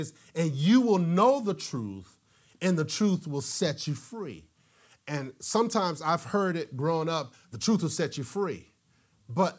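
Nothing stood out as a technical fault on listening to the speech in this recording.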